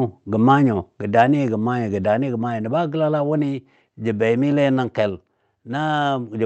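Microphone volume stepped down in this speech clip at 1.02 s (about 4 dB), then 2.04 s and 5.1 s (about 2 dB each), likely automatic input-gain reduction after overly loud levels.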